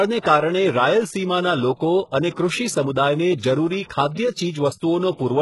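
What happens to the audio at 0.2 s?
At 0.2 s the speech already has the gritty, metallic treble that runs through the whole clip: s sounds come out lispy, the top end sounds artificial, and nothing reaches above about 11.5 kHz. The likely cause is heavy HE-AAC compression, at a bitrate consistent with roughly 12 kbps. Only the lower spectrum is coded; the treble is rebuilt by copying lower bands upward, so its harmonics no longer line up with the real ones.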